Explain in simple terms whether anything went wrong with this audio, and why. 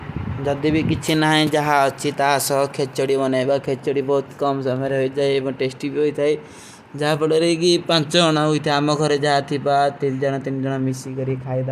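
Nothing went wrong with this speech recording: listening through it, there are no technical faults to point to anywhere in the signal.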